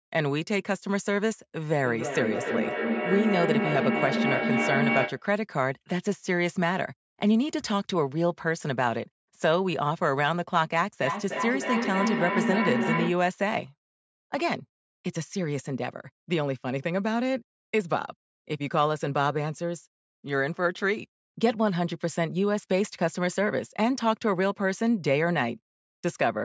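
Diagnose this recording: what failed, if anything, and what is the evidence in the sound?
A low howl near 200 Hz swells from 1.68 to 5.25 s and again from 11.01 to 13.27 s, pulsing roughly every third of a second and peaking as loud as the speech. This is feedback howl at the call stage: two devices sharing a room re-amplify each other's output on every round trip.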